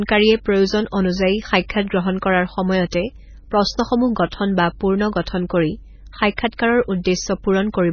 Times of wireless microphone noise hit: none

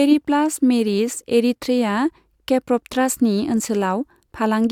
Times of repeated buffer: none

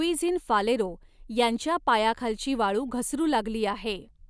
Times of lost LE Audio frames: none

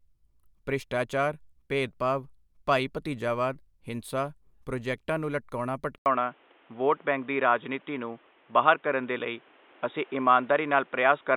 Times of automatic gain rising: none

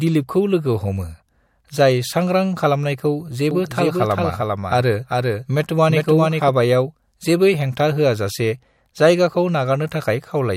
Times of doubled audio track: 3.51-6.49

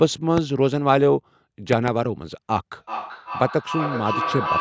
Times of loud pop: 0.37-0.40, 1.73-1.90

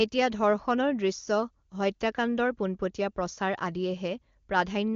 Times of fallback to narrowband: none

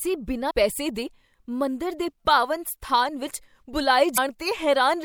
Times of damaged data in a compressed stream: 0.49, 4.14-4.18

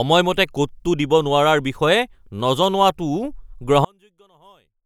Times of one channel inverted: 3.85-4.85

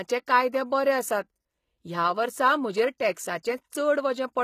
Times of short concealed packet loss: none

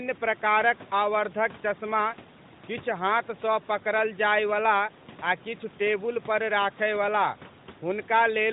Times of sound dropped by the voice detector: none

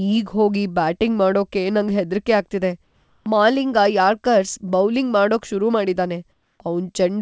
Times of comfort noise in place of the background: 2.84-3.26, 6.32-6.60

